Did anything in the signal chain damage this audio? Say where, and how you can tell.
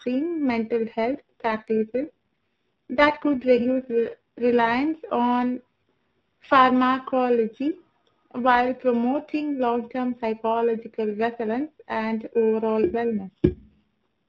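Yes. At the converter stage there is periodic clock jitter throughout the clip. Every component of the speech carries sidebands spaced around 2 kHz above and below it, which gives a rough, metallic edge that grows on brighter, higher sounds and disappears in the pauses. That tie to the signal separates it from a steady interference tone or hum, which would keep sounding through silence. A clock wobbling at that rate smears each sample's timing in step.

In the network and codec stage there are two AMR rate drops, from 1.06 to 4.68 s and from 12.84 to 13.88 s, the second right after "and overall". In both spans the speech turns buzzier and more synthetic, which fits the link pushing the AMR-NB codec down from 12.2 to 4.75 kbps to spend bits on error protection. The narrowband codec itself sounds only lightly coloured outside these spans. Packet loss would leave gaps or dropouts, and a bandwidth switch would move the top of the band, but here the sound stays continuous and the band stays the same.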